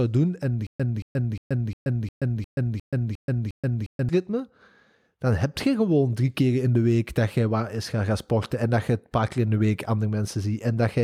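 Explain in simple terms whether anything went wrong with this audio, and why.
From 0.67 to 4.09 s, the speech catches and repeats: a short snippet of about 0.23 s plays, then drops into dead silence for about 0.13 s, and this happens nine times at a steady beat of roughly three per second. This is a stutter with silent gaps. The player likely stalled while waiting for more data, replaying its last fragment at each retry, so the speech that belonged in that stretch is missing.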